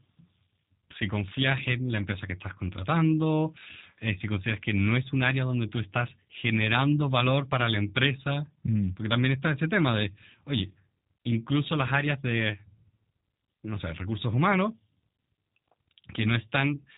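From start to finish, the speech carries G.729 codec damage. The sound fits an 8 kbit/s G.729A stream. This codec does not send the waveform. It sends a vocal tract filter, a pitch predictor and a few pulses per frame, and the decoder rebuilds speech from them. The damage is plainly audible. The speech sounds rough and synthetic. Nothing above 3.8 kHz survives, so the top end is gone and the sound is dull and narrow.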